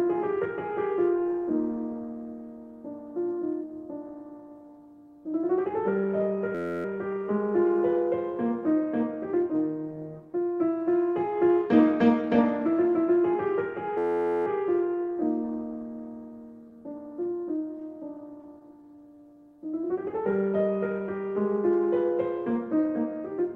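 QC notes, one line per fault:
6.55 to 6.85 s and 13.98 to 14.47 s, system hang loop: both times the output freezes on one 11.61 ms slice that repeats exactly, 26 times and then 42 times. This fits a 512-sample buffer cycling while the driver stalled. At an 86.1 Hz repeat rate the loop is a low, steady buzz, not a stutter. On a spectrogram, a flat comb of harmonics spaced 86 Hz apart. In the waveform, identical periods tile across each span.
16.70 to 19.61 s, scattered short gaps: about ten small holes, the longest around 15 ms, add up to roughly a tenth of a second of patched audio, a few percent of the span. Each hole was filled by carrying the previous sound forward, so what you hear is isolated ticks and brief smears in otherwise clear audio. A spectrogram shows thin vertical seams or smeared columns. The waveform shows short repeated or flattened patches.
18.82 to 20.31 s, jitter buffer slow-down: the receiver stretched the audio to rebuild its reserve, repeating short pitch-period pieces to add 60 ms. 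Playback runs at 96% speed with the pitch held, so sounds feel slightly drawn out. On a spectrogram, harmonics stay at the same frequencies while features lengthen in time. In the waveform, near-identical cycles are duplicated back to back.
22.38 to 23.06 s, jitter buffer speed-up: with excess audio queued, the receiver cut short pieces repeatedly, removing about 100 ms. The result plays at 112% speed at unchanged pitch and sounds hurried and compressed. On a spectrogram, events crowd closer together while harmonic spacing stays put. In the waveform, fewer cycles remain, joined at splice points where periods were dropped.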